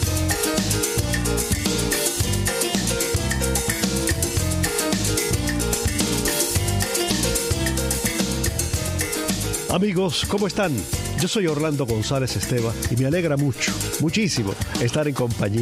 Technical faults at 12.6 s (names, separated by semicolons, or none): none